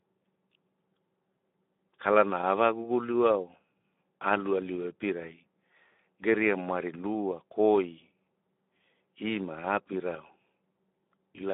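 Speex codec damage runs through the whole clip. The CELP coder lacks the bits to model the excitation, so the speech sounds hoarse and noisy, which fits a rate near 11 kbps. The band is confined to 200 Hz–3.6 kHz.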